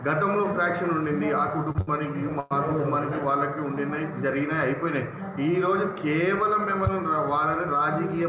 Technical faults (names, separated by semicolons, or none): short stall from a late packet; call audio freeze